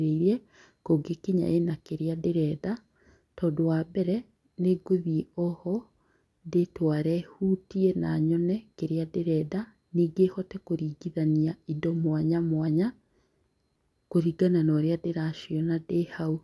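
Nothing in the recording stands out as a technical fault, so there's really nothing to flag here.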